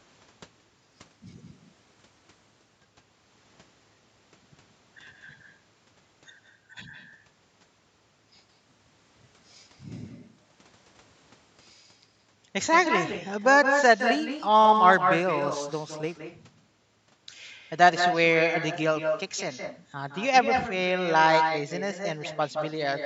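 Echo with no canceller runs through the whole clip: the far end's loudspeaker feeds its microphone, returning each phrase roughly 150 ms later, only about 5 dB quieter and thinner. Bluetooth SBC bit pool drops occur at 0.93 to 2.78 s, 8.42 to 12.29 s and 13.99 to 16.18 s. A congested link forced coarser encoding, which fits a bit pool falling from 31 to 13, so treble dulls and gritty noise rises until quality recovers.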